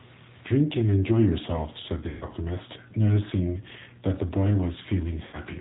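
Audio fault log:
throughout: G.729 codec. The 8 kbit/s coder rebuilds speech from a filter, pitch predictor and sparse pulses, cutting everything above 4 kHz and leaving speech plainly rough and synthetic.
2.09–2.24 s and 5.25–5.38 s: VoIP packet loss concealed by the speech codec. About 120 ms and 80 ms of audio went missing, which fits 20 ms packets. The decoder stretched its last pitch and filter with falling gain, so the speech turns into a buzzy tone or coloured noise that fades, and stays weak just afterwards.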